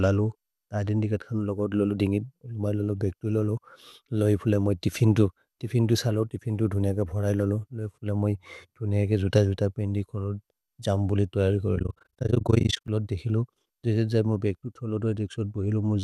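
From the start the speech sounds dull and grainy, with a gurgling, granular roughness that is plainly audible. This is most likely MP2 compression starved of bits, which fits a rate around 80 kbps: upper sub-bands are switched off and the remaining ones are coarsely quantised. Unlike the smeared, swirly artefacts of MP3 or AAC, the damage here is a band-wise granularity that flickers as bands drop in and out.

From 11.76 to 12.89 s an overlap-add ripple appears. The frames were rejoined with an overlap that does not sum to constant gain, so the level dips deeply, by about 60 dB, around 30 times a second, once per frame. It sounds like a fast, rough flutter chopping the speech. Unlike the codec's grain, it is a regular amplitude pulsation at a steady rate.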